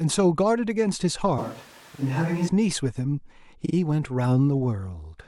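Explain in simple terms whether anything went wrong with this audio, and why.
Two things went wrong. From 1.38 to 2.48 s the recording likely switched to a distant microphone, perhaps because the close one dropped out. For that stretch the speech turns roomy, hollow and thinner, drops noticeably in level, and carries more background noise, with abrupt changes in and out.

The second fault is repeated frames: small chunks of the compressed audio were played again. At 1.94 s a chunk about 43 ms long repeats once, and at 3.65 s one repeats twice. Each is heard as a brief stutter and makes the clip slightly longer.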